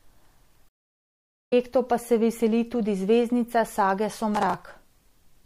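Throughout the speech there is a watery, swirling quality with smeared consonants, likely from MP3 compression at a low bitrate, which fits about 64 kbps. A spectrogram would show a hard ceiling on the treble and small patches of energy flickering on and off between frames.

From 0.69 to 1.53 s a stream reconnect leaves about 0.83 s of silence, a flat line in the waveform. The audio then picks up roughly a second further on, fading in at "pa se veseli tudi", so the material that should have filled the gap is skipped.

From 4.35 to 4.63 s, just after "veseli tudi zvezdnica sage", processor overload crackle tears through the sound. Around twenty tiny buffers, each well under a millisecond, were dropped, leaving hard-edged gaps that show as thin vertical broadband streaks on a spectrogram.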